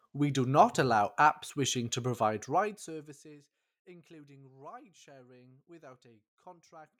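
There are no technical faults to describe in time order in this speech clip.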